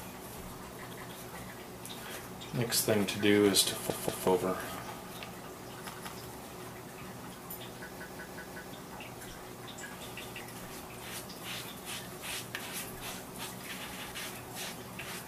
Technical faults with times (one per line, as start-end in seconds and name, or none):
0.93-1.11 repeated buffer
3.90-4.27 repeated buffer
5.94-6.13 repeated buffer
7.99-8.73 repeated buffer
10.22-10.40 repeated buffer
13.93-14.12 repeated buffer